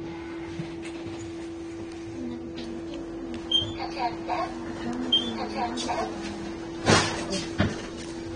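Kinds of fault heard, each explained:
AAC compression: Nothing sits above 9.7 kHz, so the top end is gone and the sound comes across dull and smeared, with plainly audible coding damage throughout. That's likely a low-bitrate AAC-LC encode, fitting something around 32 kbps.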